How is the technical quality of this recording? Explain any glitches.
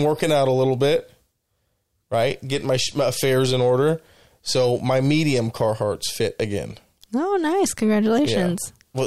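No glitches or faults heard.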